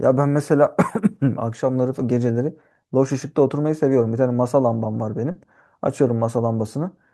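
At about 5.31 to 5.38 s, a short concealed packet loss replaces some 40 ms that never arrived. The receiver stretches the preceding sound across the hole and then blends back, so it comes across as a brief smear or wobble instead of the hard silence of a plain dropout.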